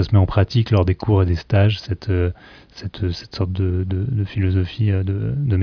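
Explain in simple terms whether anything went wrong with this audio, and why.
Nothing went wrong here; no faults can be heard.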